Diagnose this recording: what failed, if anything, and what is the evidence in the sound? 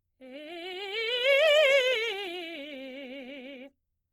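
Codec stage, across the whole music clip: tones sound grainy, rough and noisy, yet the top end stays open with few swirly holes. That's likely Opus compression in its CELT music mode, short of bits at around 16 kbps and filling bands with folded or noise energy.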